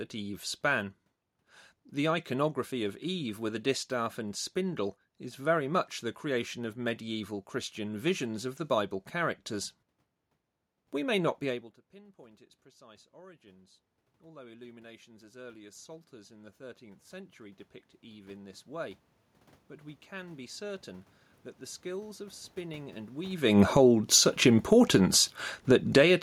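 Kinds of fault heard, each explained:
Automatic gain rising: The level at the microphone drops by about 24 dB around 11.5 s, as the talker moves away. From 11.95 s the automatic gain control slowly raises its gain by about 10 dB. Voice and room noise swell together until 26.18 s.
Automatic gain falling: Around 23.5 s the talker moves, and the input turns loud. From 23.57 s the gain control eases back by about 10 dB. The speech starts loud, then sinks gradually with its background, ending near 26.12 s.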